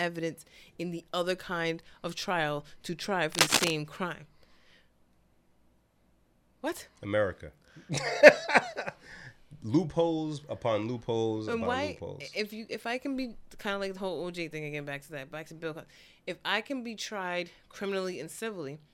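It's a speech clip, and right after "of trial to try" there's a burst of cable scratch noise from 3.32 to 3.70 s, a dense, uneven rustle sitting a few dB above the speech. That's likely a worn cable or connector being moved, with its contact resistance jumping around.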